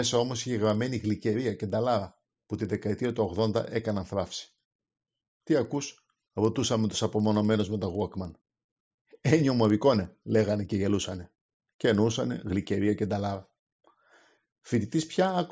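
Right from the start and all the way through, there's a faint buzz riding on the speech at 20 Hz. That's the classic sign of a resampler restarted on every block. The 48 kHz to 16 kHz conversion seems to run on 50 ms chunks independently, so each chunk edge gets a small glitch where the filter lacked its neighbouring samples. Those edge errors repeat into a low ticking buzz that drops out whenever the talking pauses.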